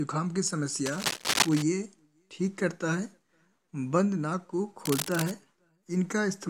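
From 0.86 to 1.63 s, a burst of cable scratch noise sits over the audio. It is dense, ragged crackling, roughly as loud as the sound itself. It returns from 4.85 to 5.32 s, shorter and somewhat quieter. Both sound like scratching or rustling laid on top. The likely cause is a worn cable, connector or control being moved. Its contact resistance then jumps about rapidly, injecting uneven bursts of noise.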